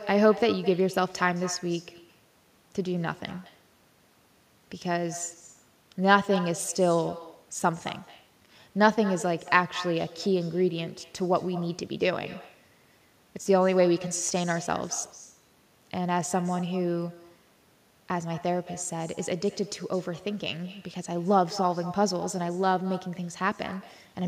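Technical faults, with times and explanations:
Throughout, echo with no canceller: every phrase returns about a fifth of a second later as a thinner copy sitting about 17 dB below the direct sound. The far end is playing the call over a loudspeaker, its microphone collects it, and nothing subtracts it before it travels back. Unlike ordinary room reverberation, which smears smoothly into a tail, this is a distinct, delayed repeat separated by a clear gap.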